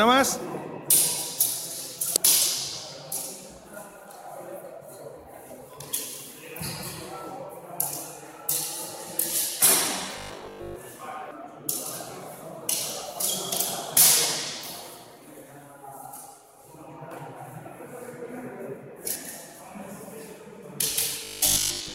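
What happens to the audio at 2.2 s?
At 2.16 s, damaged data in the compressed stream makes the decoder lose sync, producing a brief glitch heard as a chirp, squawk, click or short hole: a thin vertical disruption on the spectrogram.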